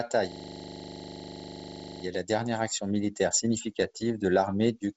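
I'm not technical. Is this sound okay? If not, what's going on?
No. From 0.32 to 2.04 s the speech stops and becomes a low, rattling buzz, as one tiny 40 ms sliver of sound repeats 25 times a second. This is a system hang loop: the computer froze briefly while the sound hardware kept replaying that same snippet.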